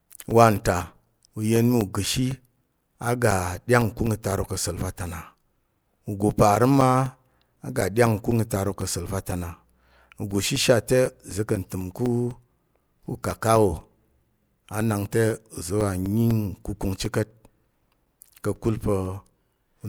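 A steady ticking runs under the speech from 0.06 s to 19.81 s, one small click every 0.25 s, heard only while sound is present. These are periodic USB or driver dropouts: something blocks the audio path at a fixed interval, and each time a brief slice of signal, around 4 ms, is replaced by silence. The abrupt gaps in the waveform produce the regular clicks across the whole recording.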